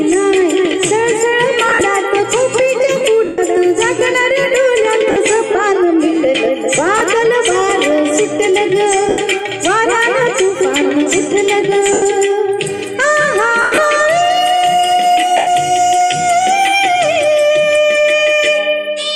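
Bluetooth LE Audio frames went missing eight times, at 1.69 s (about 80 ms lost, scattered over 120 ms, the longest gap around 50 ms), 3.25 s (130 ms), 5.11 s (50 ms), 6.98 s (30 ms), 9.09 s (90 ms), 11.93 s (90 ms), 13.62 s (140 ms across 160 ms, longest run about 100 ms) and 15.37 s (100 ms). The LC3 decoder fills each gap by repeating the last spectrum with scrambled phase, so tones smear into noisy hiss, and the longer losses sag toward silence.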